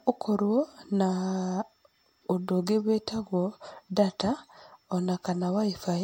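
Throughout, the speech is swirly, smeared and hollow, likely generation loss from repeated MP3 encoding; the spectrogram shows holes and a cutoff at 16.5 kHz.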